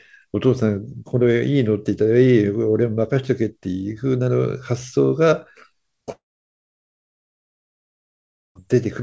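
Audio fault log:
6.12–8.58 s, long network dropout: about 2.4 s of sound never arrives, likely from lost packets. The last sound stretches into a quickly fading buzz, then near-silence until the audio resumes. The waveform shows a flat gap, and the spectrogram a blank column.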